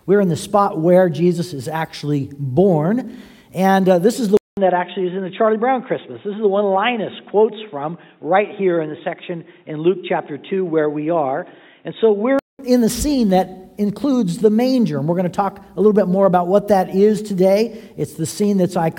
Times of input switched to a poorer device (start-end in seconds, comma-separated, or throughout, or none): 4.37-12.59